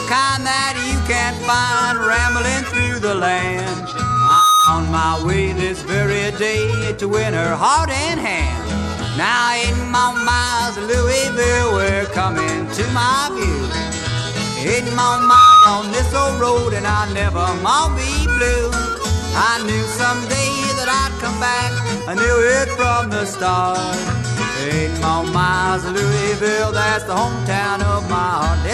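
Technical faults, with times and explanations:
3.82–4.83 s and 14.97–15.73 s, loudspeaker feedback squeal: a 1.3 kHz tone swells over under a second to above the audio level, as the microphone-speaker loop exceeds unity gain at that frequency.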